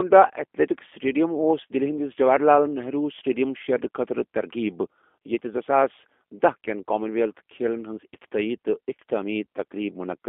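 From start to finish the speech carries G.729 codec damage: the line passes only about 250 Hz to 3.5 kHz, and each 10 ms frame is rebuilt from a filter, pitch predictor and sparse pulses, which fits an 8 kbit/s coder. Unlike simple band-limiting, the sound is plainly rough and synthetic, not merely muffled.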